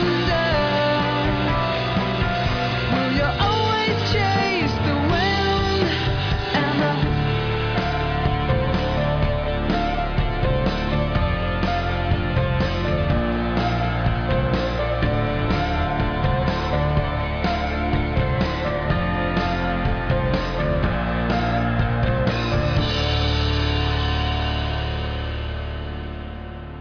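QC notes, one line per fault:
No technical faults are audible anywhere in the audio.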